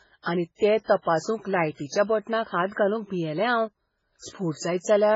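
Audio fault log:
Throughout, MP3 compression: the encoder is likely starved at about 16 kbps, so it cuts all content above 7.6 kHz and drops weak frequency lines frame by frame, leaving the speech dull, heavily watery and swirling, with smeared consonant onsets.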